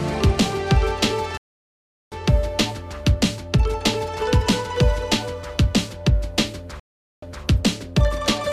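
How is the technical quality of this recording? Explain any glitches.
Quality's undermined by two stream reconnect dropouts. From 1.37 to 2.15 s the connection broke, leaving 743 ms of silence. A fresh decoder then picked up roughly 400 ms further on, so a chunk is skipped. From 6.80 to 7.43 s it happens again, with 427 ms of silence, and this time playback resumes 210 ms earlier, repeating a short stretch.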